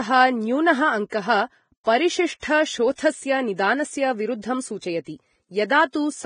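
A speech recording with heavy lossy-codec damage from start to finish. Nothing is heard above about 9.7 kHz, so the top end is cut off cleanly. The treble that remains sounds hissy and grainy. Tones have a rough edge, and consonant attacks are smeared. This is likely Vorbis compression at a low bitrate, near 22 kbps. At that rate the encoder quantises high-frequency detail so coarsely that it turns into noise-like texture.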